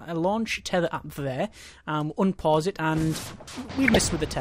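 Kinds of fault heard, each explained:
MP2 compression: The whole clip sounds dull and granular, with a gurgling texture as upper sub-bands drop in and out. That points to a low bitrate, around 80 kbps, as the likely cause. Unlike burbling, this damage is steady rather than sudden.
DAB burbling: From 3.88 to 4.16 s a burst of burbling breaks over the sound. Bit errors have slipped through into 15 frames, with an error rate well under one percent, so short blips of noise appear in single sub-bands. It stands apart from the constant codec dullness as a brief, localised eruption.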